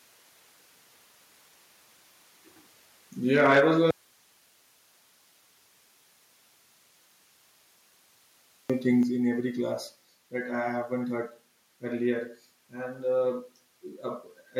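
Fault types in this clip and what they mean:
microphone overload: The microphone input was likely set too high, driving speech peaks about 6 dB past the converter's ceiling from 3.34 to 3.61 s. A few percent of samples have their tops flattened, giving those loudest syllables a harsh, crackling edge.
microphone volume stepped down: The call software likely reacted to loud or clipped input by cutting the device's input volume in single steps. Speech and background drop abruptly by about 2 dB at 3.6 s, right after the overload, then by about 4 dB at 9.03 s and about 1 dB at 10.05 s.
audio dropout to a faint residue: The speech signal was likely lost while the path after the break stayed live. From 3.91 to 8.70 s, about 4.8 s, speech cuts off abruptly and only hiss remains, about 40 dB below normal level, before speech returns just as suddenly.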